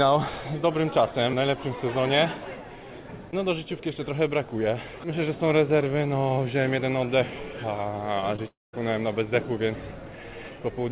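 Around 8.20 s and again at 8.36 s there's short concealed packet loss: about 20 ms each time didn't reach the decoder, so the receiver stretched the previous sound to cover it. You hear it as a quick smear or wobble through the narrowband call audio, which has nothing above 4 kHz.

Right after, from 8.48 to 8.75 s, comes what's likely a long network dropout. The last sound carries on as a fading buzz for a moment, then roughly 180 ms of near-silence, before the audio resumes with that stretch simply gone.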